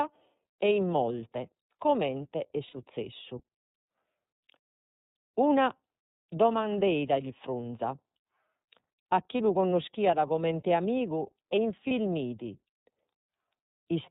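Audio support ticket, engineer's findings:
iLBC codec, whole clip: narrowband, nothing above 4 kHz, plainly rough and synthetic edge on the speech. Sounds like the 13.33 kbps mode with 30 ms frames.

Lost iLBC frames at 2.67 s (60 ms, looks like two frames) and 11.87 s (30 ms, one frame): brief buzzy held-vowel smear. The decoder repeats the last pitch cycle plus noise, and the speech snaps back right after.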